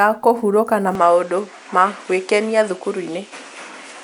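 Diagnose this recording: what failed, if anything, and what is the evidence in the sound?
Driver or device stage: from 0.95 s, after "kũhurũka na", the spectrogram goes empty above 10.3 kHz and adds a new noise floor with no gap. This is likely an input switched to a poorer device.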